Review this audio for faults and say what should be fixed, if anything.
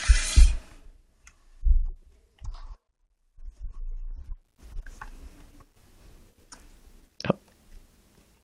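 Zipper noise, 0.51 to 1.00 s and 4.01 to 4.63 s: the gain moves in unsmoothed 2 dB jumps, around twenty a second on the cut of about 15 dB and fifteen on the matching rise, so each step clicks and the speech carries a ticking rasp. Prevent it by ramping gain per sample, or with a short smoothing filter.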